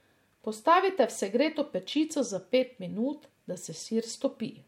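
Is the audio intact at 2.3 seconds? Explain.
No. At 2.3 seconds, as throughout the clip, the speech shows signs of low-bitrate audio saved at a high bitrate: it was likely first squeezed through a low-rate MP3 encoder, around 63 kbit/s, then re-encoded at about 192 kbit/s. The second pass cannot restore what the first discarded, so the sound keeps a hard ceiling with nothing above 16.5 kHz, plus the smeared, watery coding artefacts of the original lossy encoding.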